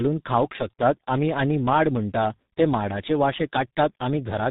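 From start to end the speech carries tandem speech coding: it sounds as if it passed through two separate speech codecs in succession, each re-encoding the previous one's already damaged output, which fits a low-rate ADPCM stage followed by a parametric coder such as G.723.1 at 6.3 kbit/s. The result is rough, muffled and warbly. On a spectrogram nothing appears above 3.8 kHz, and harmonics look smeared and blotchy rather than cleanly striated.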